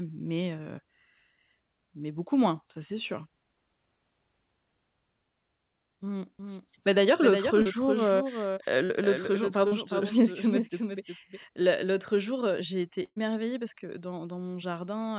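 From 6.39 s to 11.39 s a doubled audio track runs under the speech. Most likely a second, slower capture path or a misaligned edit is feeding the same audio in again, trailing by roughly 0.4 s and sitting about 5 dB below the original. The copy is full-band and dry, with no decay or room colour, so it reads as a distinct echo rather than reverberation. It switches on and off abruptly at its edges.

Three short concealed packet losses fall inside that doubled stretch, at 7.62 s, 8.85 s and 9.68 s. Each time about 40 ms of speech failed to reach the decoder, and the receiver filled the hole by extending the preceding sound, as a continued pitch where it was voiced and as shaped noise where it wasn't, before blending back in. Each one comes through as a brief smear or wobble, and a consonant there can drop out.

At 13.04 s to 13.18 s a burst of packet loss removes about 120 ms. The decoder again continues the last sound, tapering it as the gap lengthens and ending in roughly 50 ms of silence. 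A voiced stretch turns into a short held buzz, other sounds into a fading hiss. The speech then resumes further along with the intervening portion missing. All of this sits within the G.711 call path's band, which stops at 4 kHz.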